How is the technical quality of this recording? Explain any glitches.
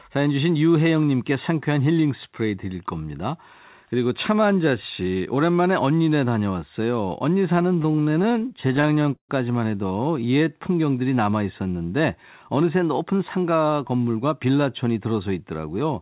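The speech has three timing glitches from its delivery over a call link, and it is band-limited throughout, with nothing above 4 kHz, which fits a G.711 A-law call codec at 64 kbps.

Repeated stalls (stutter), 7.62 to 9.31 s: packets arrived late, the jitter buffer kept running empty, and 20 gaps totalling 363 ms were filled by stretching the last sound (the longest 141 ms), so the speech drags and stutters.

Jitter buffer slow-down, 10.19 to 10.46 s: to build up a reserve, the receiver repeated pitch periods, adding 44 ms, so this stretch plays at 86% speed with unchanged pitch and sounds drawn out.

Jitter buffer speed-up, 12.49 to 13.59 s: the buffer held excess delay, so the receiver cut roughly a tenth of a second of pitch periods, and the speech runs hurried at 108% speed with unchanged pitch.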